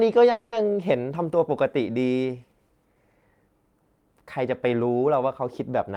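From 0.31 to 0.54 s the speech stalls in a call audio freeze. The last sound carries on as a fading buzz for about 210 ms, with no silent stretch, and then the speech resumes where it stopped with nothing lost. The stall likely comes from packets held up in transit, so the jitter buffer emptied and the receiver filled the gap by extending what it last had, pushing everything after it 210 ms later.

At the very end, from 5.90 to 5.97 s, a jitter buffer speed-up makes the final fragment of speech run at about 170% of normal speed while keeping its pitch, so it sounds clipped and rushed. The receiver had more audio queued than it wanted and trimmed it by cutting out short pitch-period pieces in quick succession, removing roughly 50 ms in total to bring the delay back down.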